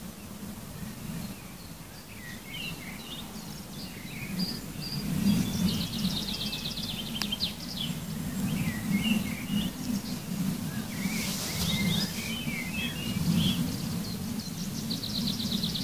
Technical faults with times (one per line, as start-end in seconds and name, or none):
none